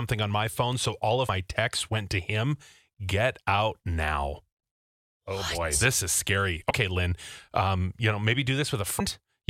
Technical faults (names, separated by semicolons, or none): damaged data in a compressed stream